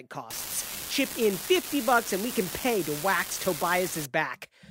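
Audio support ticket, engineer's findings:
Unreliable data bit, 0.31 s to 4.05 s. Steady crackle/fizz over the speech, continuing through pauses. Probable component: one marginal data line. Its bit flips in a random share of samples, each error an identical spike of about -20 dBFS. Differs from clipping or dropouts: not tied to signal level, and pops don't vary in size.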